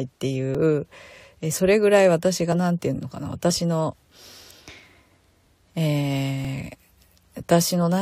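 Small skips at 0.55, 2.52, 3.50, 6.45 and 7.43 s come from overlap between stream segments: 1-second segments with overlapping timestamps, so a few milliseconds of speech are trimmed.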